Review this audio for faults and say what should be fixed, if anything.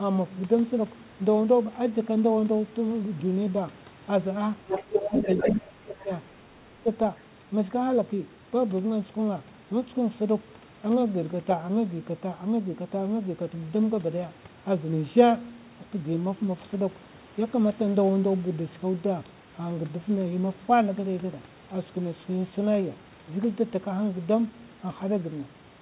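The echo canceller likely did not fully cancel the far end's loudspeaker playback picked up by the microphone, so the other side's voice leaks through. From 4.67 to 5.54 s a second voice sits only slightly below the talker, around 5 dB quieter. At 6.0 s a much fainter scrap returns, roughly 30 dB down. Better echo-path modelling, with adequate adaptation and residual echo suppression tuned for this loudspeaker level, would prevent it.

When both sides talked at once, the echo canceller likely could not tell its own talker from the echo and turned both down. This is speech suppressed in double talk. The talker's level dips by about 20 dB from 4.85 to 5.08 s, then by about 25 dB between 5.44 and 6.1 s, and most sharply, around 30 dB, from 6.51 to 6.86 s, so the voice drops away in pieces across about a second in total. A reliable double-talk detector that freezes adaptation and limits suppression during overlap would prevent this. 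All of this is heard through the G.711 A-law call path, which carries nothing above 4 kHz.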